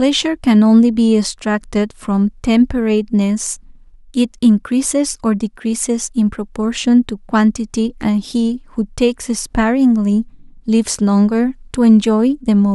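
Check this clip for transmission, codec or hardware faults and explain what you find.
No transmission, codec or hardware faults turn up anywhere in this speech clip.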